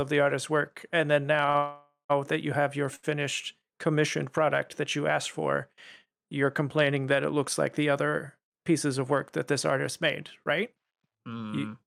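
Short stalls from late packets come at 1.45 to 1.50 s and 1.50 to 1.56 s, just after "artist's work and then". Each time a packet missed its slot, the jitter buffer ran dry, and the receiver held the last sound for about 28 ms and then 41 ms, a brief smeared drag with nothing lost.

A call audio freeze follows from 1.56 to 2.11 s. The last sound is stretched into a fading buzz that reaches about 100 ms of silence before playback resumes where it stopped, a gap of about 531 ms. Packets held up in transit are the likely cause.

Another short stall from a late packet, 2.95 to 3.05 s, comes right after "that you have your". The sound is held for about 75 ms, a longer hang with a slight buzz or dip before the audio continues unbroken.

Jitter buffer speed-up runs from 9.55 to 10.05 s. The buffer had built up surplus delay, so the receiver cut many tiny pitch-period pieces, a few tens of milliseconds in total. 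The audio plays about 5 percent fast at unchanged pitch, sounding slightly hurried.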